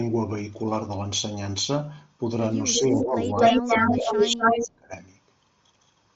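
Concealed Bluetooth headset packet loss at 1.44 s: about 15 ms of audio, which fits a couple of lost frames between headset and phone, was filled by repeating a matching stretch of recent waveform. It is a single short loss, so the patch is nearly hidden, only a faint blip within the light graininess of the mSBC link.

Echo leak from 2.73 to 3.05 s and again from 3.37 to 4.67 s: a delayed copy of the speech comes back, first about 336 ms late and roughly as loud as the speech itself, then about 249 ms late and somewhat louder than it. The likely cause is a loudspeaker on the far end whose echo canceller let its own microphone pickup through.

Speech suppressed in double talk from 2.75 to 3.4 s and from 3.57 to 4.92 s: the speech ducks in patches while the other side is talking. It drops by around 10 dB in the first stretch and by as much as about 20 dB across roughly a second in the second. 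This is likely the echo canceller failing to separate the talker from the echo and turning both down.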